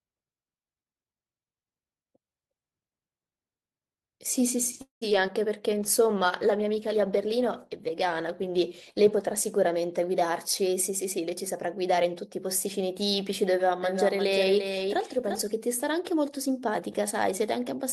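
At 4.81 s the speech stalls in a call audio freeze lasting until 5.03 s, most likely because packets were held up in transit and the jitter buffer ran dry. The receiver stretches the last sound into a fading buzz that decays to silence for about 130 ms, filling roughly 200 ms in all. Nothing is lost; the speech resumes where it stopped, now arriving about 200 ms later than before.

Right after, two instances of short concealed packet loss follow, at 5.09 to 5.12 s and 5.26 to 5.30 s. In each, 20 ms of audio failed to reach the decoder in time. The receiver covered the hole by extrapolating the preceding sound and crossfading back into real audio. Each is heard as a brief smear or wobble, and any short consonant falling in those windows may vanish.

From 5.70 to 11.64 s there is a call bitrate drop: the bandwidth estimate fell and the Opus encoder was pushed from 40 kbps down to 15 kbps, holding at that floor for about 3.2 s. 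At the lower rate the coding is coarser, so the speech turns rough and watery, with high-frequency content thinned compared with the 12 kHz bandwidth heard at the normal rate, until the bitrate climbs back.

Overlapping the end of that stretch, a jitter buffer speed-up runs from 10.32 to 13.43 s. The buffer had accumulated more audio than its target, so the receiver repeatedly cut out short pitch-period-length pieces, removing about a fifth of a second in total. The speech plays at 106 % speed with unchanged pitch, sounding slightly hurried.

Finally, from 13.83 to 15.41 s a doubled audio track appears, likely from the same audio being captured a second time through a slower path. A full-band copy trails the original by around 0.4 s at about 5 dB lower level. It carries no reverb or room colouring, reads as a dry, distinct echo of each phrase, and switches on and off abruptly at the edges of that span.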